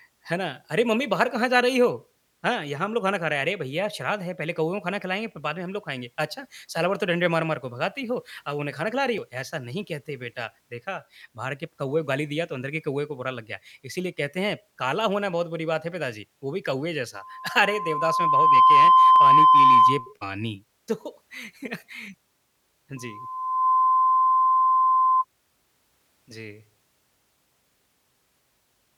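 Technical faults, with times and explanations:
9.18 s and 19.16 s, audio missing between chunks: the speech jumps forward with no gap, losing a few tens of milliseconds each time. The 10 s spacing likely points to a recorder handling the audio in 10-second blocks and dropping a sliver at each handover, so the sound skips.
17.15 to 20.13 s and 22.97 to 25.25 s, loudspeaker feedback squeal: the microphone is picking up the loudspeaker it drives, and at 1 kHz the loop gain passes one. That tone grows by itself over about 1.5 s the first time and under a second the second time, and it peaks at about 15 dB and 10 dB above the speech. The result is a piercing whistle over the talking.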